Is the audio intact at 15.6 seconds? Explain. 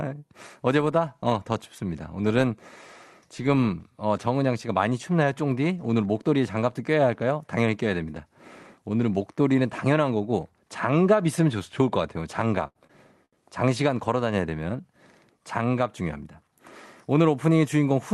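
No. At 15.6 seconds you're inside a jitter buffer speed-up that runs from about 15.31 to 16.28 s. The receiver had built up more audio than it wanted, so it trimmed out short pitch-period-sized slices again and again, around 70 ms in total, to catch up. That plays this stretch at about 106% speed with the pitch unchanged, so the speech comes across slightly rushed before settling back to normal pace.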